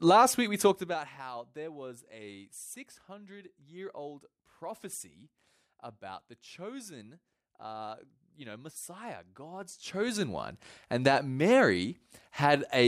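Level changes applied in unsmoothed 2 dB steps cause zipper noise: a fast ticking as the level drops by about 20 dB from 0.65 to 1.12 s, after "week we", and climbs back from 9.49 to 10.21 s, before "one and that".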